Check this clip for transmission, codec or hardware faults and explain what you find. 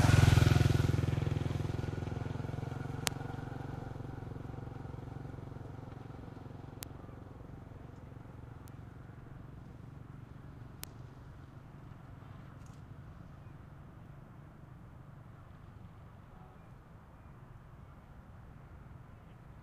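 Four isolated sharp ticks stand out from the sound, at 3.07, 6.83, 8.68 and 10.84 s. These are bit error spikes. Each is a single bright click spread across the whole spectrum, with no relation to the surrounding sound. The loudest, at 3.07 s, peaks around -4 dBFS and spans three consecutive samples. The ticks at 6.83 and 10.84 s reach about -10 dBFS, and the one at 8.68 s is faint, near -28 dBFS. Each comes from one flipped bit in memory or on a digital link, which throws a sample's value off by a power of two for an instant before it snaps back.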